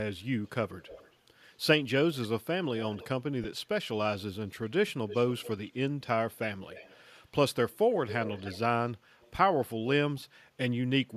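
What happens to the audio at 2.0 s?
Nothing goes wrong at 2.0 s; the speech passes through intact at that moment, with only the light coding of what is likely a Bluetooth LC3 link.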